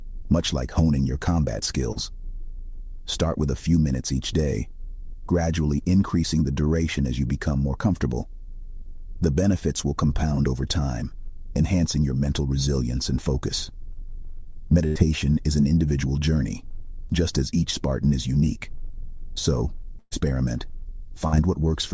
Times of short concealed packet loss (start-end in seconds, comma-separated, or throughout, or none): 1.92-1.98